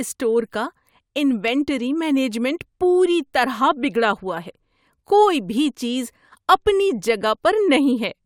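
At 1.48 s and again at 4.29 s the speech carries a single sharp click, likely dropped samples: a handful of samples missing, so the waveform jumps abruptly. Unlike a dropout, nothing audible goes silent; only the discontinuity is heard.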